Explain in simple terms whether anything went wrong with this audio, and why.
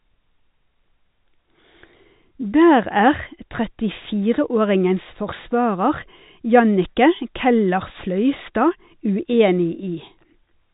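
Nothing went wrong: the speech has the narrow, muffled sound of an ordinary phone line because it passed through G.711 telephone coding, which drops everything above 4 kHz, and nothing else is audible.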